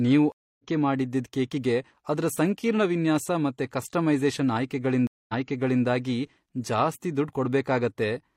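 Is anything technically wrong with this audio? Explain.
Yes. There are two stream reconnects, at 0.32 to 0.65 s and at 5.07 to 5.84 s. Each time the connection dropped, playback went silent, and a new decoder restarted partway through the stream. The first gap is 270 ms and the speech resumes roughly a fifth of a second further on, so a short stretch is skipped. The second gap is 218 ms, but the server resent a burst, so the speech picks up 555 ms earlier and repeats material already heard.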